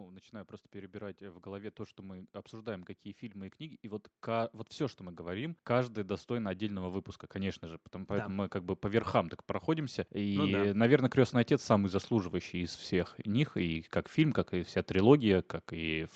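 Automatic gain rising from 0.05 to 9.12 s and again from 9.66 to 13.88 s, just before "как фильм как и": the gain control, judging the speech too quiet, lifts voice and background together, by about 13 dB and then about 7 dB.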